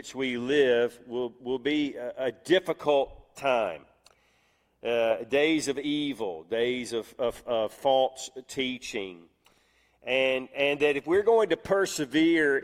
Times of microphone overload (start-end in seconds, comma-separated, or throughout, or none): none